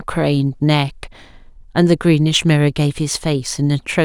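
Right from the start and all the way through, there's sample clock jitter on this speech. The converter's clock wanders by something like a microsecond and a half, so each sample lands a touch early or late. Steep parts of the waveform suffer most, which leaves a fine hiss and grit riding on the louder, brighter sounds, sitting roughly 40 dB under the speech and dropping away in the pauses.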